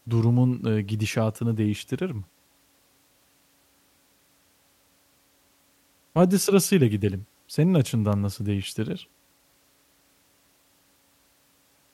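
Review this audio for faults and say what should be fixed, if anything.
CD scratch ticks run from 8.13 to 9.64 s: seven brief ticks, the longest lasting only a few milliseconds, recurring about five times a second. A surface blemish defeats error correction once per disc revolution, so the player interpolates or mutes the damaged samples. Re-rip from a clean disc using a secure, verifying ripper.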